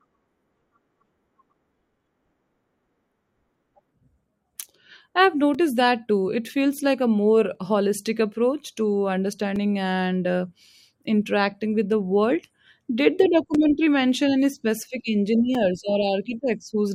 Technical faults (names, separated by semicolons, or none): periodic USB or driver dropouts